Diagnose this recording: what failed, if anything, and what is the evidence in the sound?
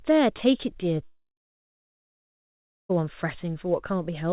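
The network stage failed, likely as a long network dropout. From 1.04 to 2.98 s the speech stops. The receiver stretches the last sound into a fading buzz, then about 1.65 s of near silence follows. Speech resumes with nearly two seconds missing.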